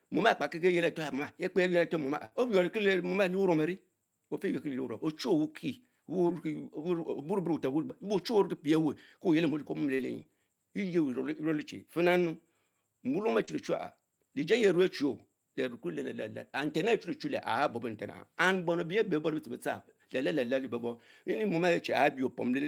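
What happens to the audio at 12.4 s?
Nothing goes wrong at 12.4 s; the audio is intact there, with no dropout, click, distortion or other fault at that point.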